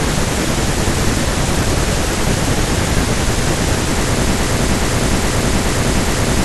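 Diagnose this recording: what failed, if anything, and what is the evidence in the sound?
A broken-record loop at the playback or streaming stage, most likely a stalled player or stream buffer that kept re-sending the last fragment it held. At 4.32 s the speech stops advancing and a 0.42 s fragment repeats exactly, back to back, five times, running to the end of the clip. Because the loop stands in for new material, whatever should have followed in those final two seconds is gone rather than delayed.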